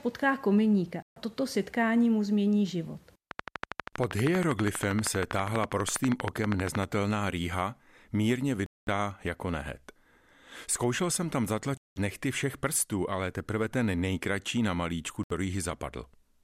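Czech speech with two kinds of fault. Four Bluetooth dropouts cut the sound to silence at 1.02 to 1.18 s, 8.66 to 8.88 s (right after "rýha mírně"), 11.77 to 11.97 s (between "jsem tam" and "nechty všech prstů ale") and 15.23 to 15.32 s. These gaps of roughly 70 to 210 ms show as blank vertical bands with sharp edges on a spectrogram and as flat lines in the waveform, and are likely caused by wireless packets arriving too late. From 3.31 to 6.84 s, between "setkání mu změní život" and "rýha mírně", a train of clicks ticks at a regular 12.5 per second, around fifty in all, peaking roughly 15 dB above the speech. It most likely comes from interference or a faulty connection or power supply, and it appears as evenly spaced thin vertical lines and spikes.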